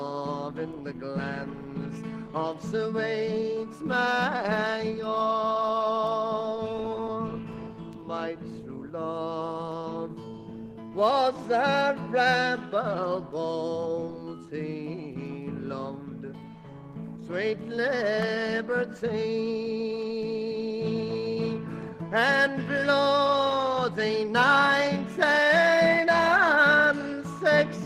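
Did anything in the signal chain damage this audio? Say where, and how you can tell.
No, nothing along the chain from capture to playback has left an audible mark on this audio, so there is no stage to point to.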